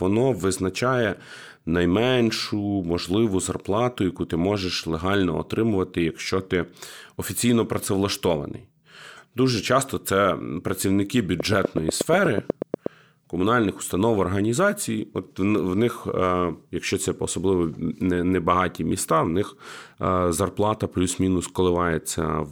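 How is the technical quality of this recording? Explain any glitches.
The recording has one clear glitch. From 11.40 to 12.87 s there is a train of clicks: around fifteen evenly spaced pulses at about 8.2 per second, well above the speech, likely from electrical interference or a faulty connection or power supply.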